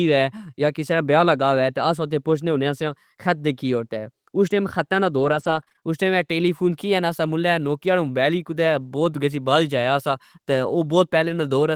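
Speech with repeated packet loss (robotic sound) from 5.19 to 5.84 s, between "اس ٹئم حطہ نا" and "اس ٹئم اے ٹیلیفون". A handful of short holes, the longest 31 ms, are patched by extending the preceding sound, concealing about 16% of that span and giving a choppy texture.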